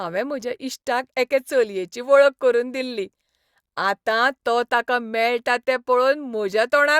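No technical faults are audible anywhere in this speech recording.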